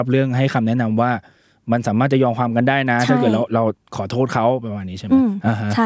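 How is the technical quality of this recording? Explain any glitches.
Nothing stood out on listening to this speech recording, which has passed through ordinary call microphone processing with nothing above 8 kHz and the lowest bass taken out by its high-pass filter.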